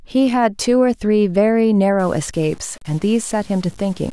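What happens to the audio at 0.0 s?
Nothing goes wrong at 0.0 s; the audio is intact there with no dropout, click or distortion.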